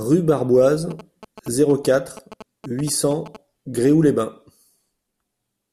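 GSM signalling bursts from a nearby 2G phone are rectified into the audio from 0.91 to 3.37 s, giving a galloping dit-dit-dit of short 217 Hz buzzes about 15 dB below the speech.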